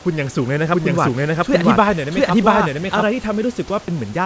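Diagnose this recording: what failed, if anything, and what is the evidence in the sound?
From 0.72 s to 3.04 s the speech is heard twice: a second, full-band copy at about the same level trails the first by roughly 0.7 s. It has no decay or room colour of its own, and it cuts in and out abruptly at both ends. This is a doubled audio track, likely from a second capture of the same signal through a slower route, or an edit holding two out-of-step copies. Both copies share the 8 kHz ceiling expected of the G.722 call path.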